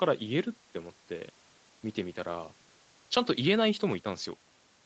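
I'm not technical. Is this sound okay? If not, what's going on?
Yes, this speech is fine: it has gone through the normal microphone processing and Opus audio coding of an internet call, which keeps everything up to 8 kHz, so it has the slightly narrower, phone-call quality you'd expect from such a call, and nothing has gone wrong.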